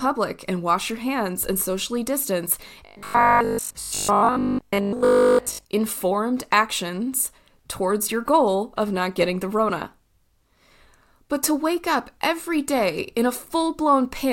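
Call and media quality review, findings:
Robotic sound from repeated short buffers, 2.87 to 5.65 s. Audio likely reaching the playback buffer too seldom. The last 20 ms is looped to fill the gaps, so most of the real signal is skipped. The loop forces a fixed 50 Hz buzz, and the speech turns rigid and metallic, only loosely following the original.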